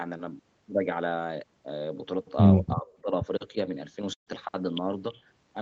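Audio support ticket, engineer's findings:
Speech suppressed in double talk, 2.74–3.11 s: level dips by about 15 dB over roughly 300 ms. Likely the echo canceller's suppressor mistaking near-end talk for loudspeaker echo while the far side speaks, and attenuating both.

Burst of packet loss, 4.13–4.29 s: about 140 ms of audio missing. The jitter buffer fills 132 ms with concealment of the last sound, decaying to silence for 110 ms before playback resumes further on. The Opus path's band limit near 8 kHz applies throughout.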